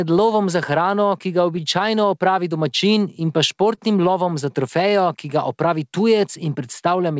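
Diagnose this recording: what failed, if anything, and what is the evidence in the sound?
Clock drift between sender and receiver, at the jitter-buffer stage: the sender's clock runs a few percent slow, so the buffer keeps draining all through this speech.

Repeated timing corrections from 0.70 to 7.04 s: the receiver keeps stretching small bits to cover the shortfall, adding roughly 150 ms, so the pacing feels about 2% slow.

Short stall from a late packet at 3.75 to 3.79 s: the buffer ran dry, so the last sound gets held for 24 ms with a slight buzz or dip. Nothing's lost, and it then picks up where it left off.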